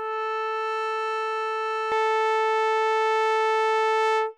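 From the start to about 1.92 s the music shows channel delay (comb filtering). One channel arrives a fraction of a millisecond late, and summing to mono cancels shared content at evenly spaced frequencies, the first near 700 Hz and the next roughly 2.1 kHz. The result is a hollow, phasey tone. Unlike a flanger or phaser, the notches stay fixed instead of sweeping, and unlike a plain low-pass, the highs are carved into regular gaps rather than simply rolled off.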